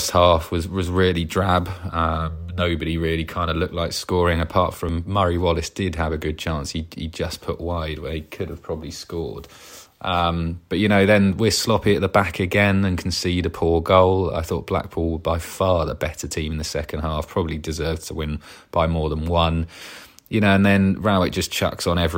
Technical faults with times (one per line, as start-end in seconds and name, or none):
4.89 audio missing between chunks
14.84 audio missing between chunks